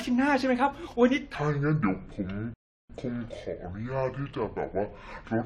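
From 1.35 s to the end, the speech drops into a section at the wrong speed, running at about 0.64 times normal, so everything turns slow and deep, roughly seven semitones down. Likely cause is the section being played back against the wrong clock.

Then at 2.54 s there's a rebuffering stall: the audio cuts to silence for about 356 ms, as if the player ran dry waiting for data, and picks up at 2.90 s exactly where it left off, with nothing lost.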